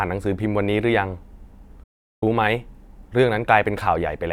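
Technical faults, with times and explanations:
1.83 to 2.23 s, digital broadcast dropout: the speech fades out in about 8 ms and leaves a hole of roughly 0.4 s before returning mid-programme, because the receiver muted while corrupted frames arrived, consistent with a dozen or so consecutive frames lost.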